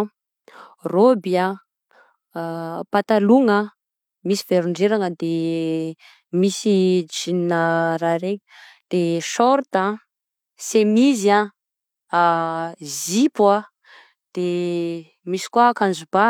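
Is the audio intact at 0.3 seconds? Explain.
Yes, the speech at 0.3 s plays through intact, with no dropout, click, distortion or other fault at that moment.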